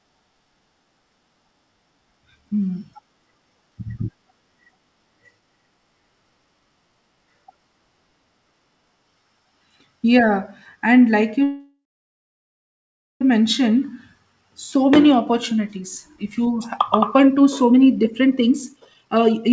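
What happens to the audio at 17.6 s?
The speech runs hurried at unchanged pitch, about 120% speed, from 15.05 to 19.52 s: a jitter buffer speed-up trimming pitch-period slices, roughly a second in total.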